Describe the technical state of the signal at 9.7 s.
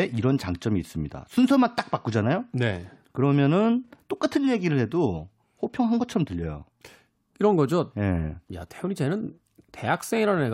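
A brief garbled flutter runs from 9.58 to 9.70 s, ending right at 9.7 s. It is frames out of order: two adjacent runs of about 52 ms each were decoded in swapped order, so that stretch of speech plays with its halves exchanged.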